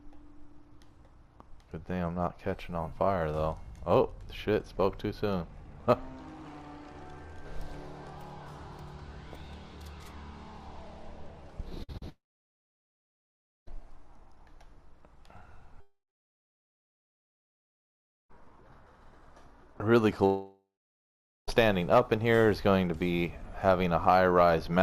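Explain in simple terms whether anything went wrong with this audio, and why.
Yes, the connection broke up several times, all between about 11.8 and 21.5 s.

First, a burst of packet loss at 11.83 to 11.90 s: several pieces of the audio stream in a row arrived too late or not at all, about 60 ms' worth. The receiver covered the hole by stretching out the last sound it had and fading it down, so you hear a brief held buzz or hiss, then the audio jumps ahead with that bit missing.

Right after, there are two smaller gaps, each a short concealed packet loss: one at 11.92 to 11.96 s (about 20 ms lost) and one at 11.98 to 12.03 s (about 40 ms lost). Each time the receiver patched the hole by continuing the previous sound and blending back into the real audio. These come across as a quick smear or wobble rather than a clear gap.

Then come three long stretches with no audio arriving at all, most likely long network dropouts: 12.09 to 13.68 s, 15.80 to 18.46 s, and 20.25 to 21.49 s. 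Each begins with a short fading buzz or hiss as the receiver tries to fill in, then goes silent: about 1.5 s, 2.3 s and 0.8 s of silence respectively. When sound returns, it picks up further along, so those parts of the recording are simply gone.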